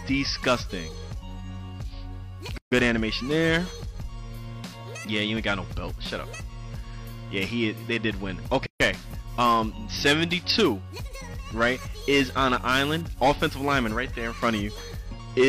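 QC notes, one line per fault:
2.58 s and 8.66 s: gap at a join of encoded pieces. Separately encoded segments were butted together without trimming, so one run's end padding and the next run's start delay both survive at each seam. The result is a hole of about 141 ms and 139 ms of silence cut into continuous sound, with edges smeared by the codec, after which the sound resumes exactly where it broke off.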